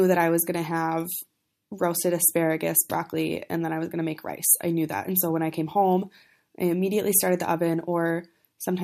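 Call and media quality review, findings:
No faults found in the reviewed speech clip. Nothing flagged for follow-up on this ticket.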